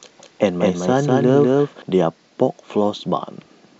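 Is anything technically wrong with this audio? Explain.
Yes. A doubled audio track runs from the start to 1.82 s: a second, equally loud, dry copy trails about a fifth of a second behind, likely from the signal being captured twice, then stops abruptly.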